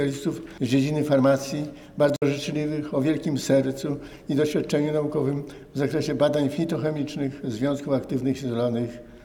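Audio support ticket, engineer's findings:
Short silence at 2.16–2.22 s, about 53 ms of audio missing, playback resumes further along rather than where it cut. Likely Bluetooth dropout: packets reached headphones late and were discarded, consistent with roughly four lost packets.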